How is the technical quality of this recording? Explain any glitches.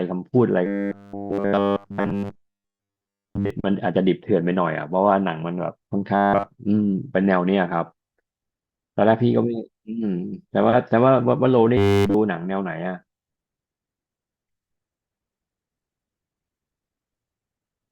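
Three stretches of speech collapse into a rigid, metallic 100 Hz buzz, from 0.66 to 3.50 s, 6.16 to 6.46 s and 11.77 to 12.14 s. The likely cause is robotic sound from repeated short buffers: a roughly 10 ms chunk replays continuously while the real audio is skipped.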